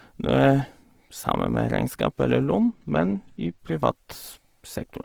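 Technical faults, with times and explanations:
Throughout: Opus compression. The speech has a rough, grainy texture, with harmonics losing their clean edges. That points to an Opus encoder in its music mode, likely running at a low bitrate around 16 kbps. It keeps each band's energy but fills starved bands with noise or folded copies of lower ones. A spectrogram shows the band still reaching about 20.3 kHz, with few hard holes but speckled, smeared detail in the upper bands instead of crisp harmonic lines.
2.59 to 3.59 s: channel delay (comb filtering). For this one-second stretch the top end turns dull. One channel arrives a tiny moment late, around two samples or a few hundredths of a millisecond, and is summed with the other to mono. Content shared by both channels cancels where the two copies are out of step, with the first notch landing near 10 kHz. A spectrogram shows a dark horizontal gap around 10 kHz that starts and stops sharply at these times. 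The waveform changes little, because the low frequencies still add up normally.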